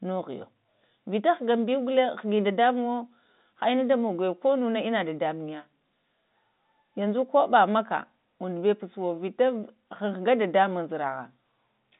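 No faults turn up here: the speech simply sits in the narrow telephone band of G.711 coding, with nothing heard above roughly 3.8 kHz, just as a fixed line would carry it.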